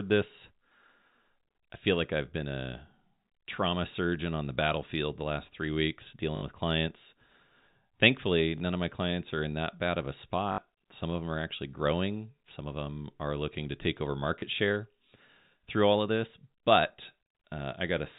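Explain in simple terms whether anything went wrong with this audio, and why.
Packet loss with last packet repeated: the phone link dropped audio four times, and the receiver replayed its last chunk of sound to fill each gap, at 6.36–6.42 s, 8.58–8.60 s, 10.52–10.58 s and 14.40–14.42 s. The two longer gaps give a brief robotic stutter and the two short ones a small blip, longest at 6.36 and 10.52 s (about 60 ms), which fits three 20 ms packets.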